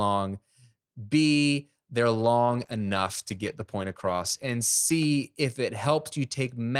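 From 2.47 s to 5.87 s the speech turns rough, watery and muffled, harshest for about 2.1 s, before clarity returns. This is a call bitrate drop: the bandwidth estimate fell and the encoder coded more coarsely, trimming high frequencies, which fits a fall from 32 to 14 kbps.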